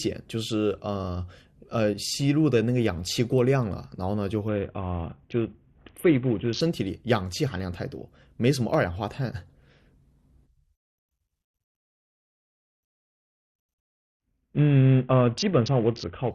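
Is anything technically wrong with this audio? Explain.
Yes. A Bluetooth SBC bit pool drop occurs twice in this speech, from 4.48 to 6.61 s and from 13.74 to 16.31 s. Link congestion forced the sender to cut the bits per audio frame, which fits a fall from a bit pool of 28 to about 5, or roughly 54 kbps. The upper sub-bands are starved and the remaining bands are coarsely quantised, so in both stretches the treble goes dull and a gritty noise rises.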